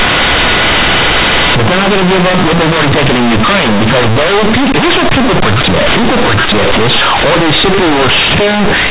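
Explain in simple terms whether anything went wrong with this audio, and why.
Something went wrong in how the audio was decoded. The speech was stored in A-law, the compressed 8-bit format used for telephone calls, but the player treated those bytes as ordinary 8-bit samples without first expanding them. This is companded audio read as linear, and it lasts the whole clip, from start to end at about 9 seconds. Each time the waveform crosses zero, the output jumps across about half its range, so quiet moments come out as large as loud ones. The result is very loud, buzzy distortion, with strong noise filling the pauses between phrases. The telephone coding itself worked as intended.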